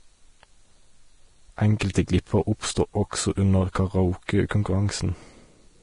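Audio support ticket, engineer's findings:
Whole clip: grainy, hissy treble, roughened tones, blurred attacks, nothing above 10.6 kHz. Likely Vorbis compression, heavy damage, fitting a 32 kbps encode. Coarse residue quantisation turns fine treble detail into noise. Low cut-off removes the top band.

1.79 s: short hiss just before the attack leading into "glipper oppstod også under". Pre-echo from the transform codec. Quantisation noise spread over the whole block leaks ahead of the onset, 16 ms early.

4.49 to 4.51 s: same symptom. Hiss precedes an onset, attack softened. Pre-echo again. Noise sized for the loud part fills the quiet moment before it, spread over 20 ms.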